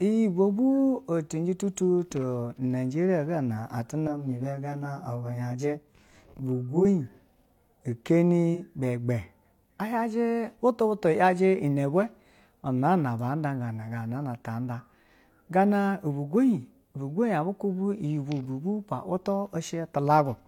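A speech recording with two technical faults. From 4.07 to 6.85 s there is channel delay (comb filtering): one channel runs roughly 20 ms behind the other, and when they are summed to mono the shared content cancels at evenly spaced frequencies, with the lowest notch somewhere around 20 Hz. The voice turns rough and slightly doubled for that stretch. A spectrogram shows a fixed ladder of dark horizontal notch lines across the band, starting and stopping sharply at those times. At 8.54 to 8.60 s there is AAC frame loss with concealment. A gap of about 43 ms, which fits a single lost frame, was patched by the decoder from the last good spectrum, so the voice briefly sounds smeared and noisy. In the spectrogram this is a short vertical smudge of blurred, grainy energy. The waveform shows a slightly irregular patch rather than a dropout to silence.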